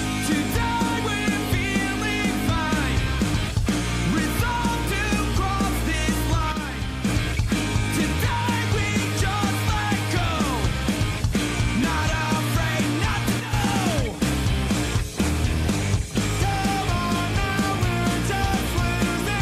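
The audio has two sudden gain jumps. At 6.52 s the level drops by about 5 dB, then returns at 7.05 s. At 13.40 s it drops by about 6 dB until 13.53 s. Sound and background fall together. The likely cause is a digital gain change applied without a ramp.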